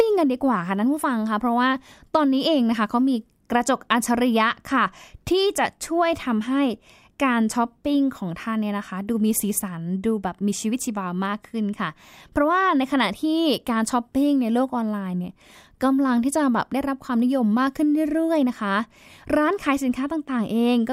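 No technical faults are audible.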